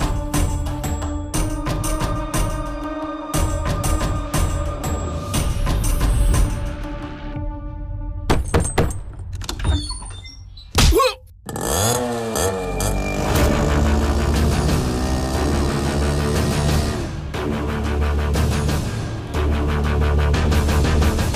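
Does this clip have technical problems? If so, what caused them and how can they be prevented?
No, nothing stood out as a technical problem on listening to this clip, so there is nothing here that needs preventing.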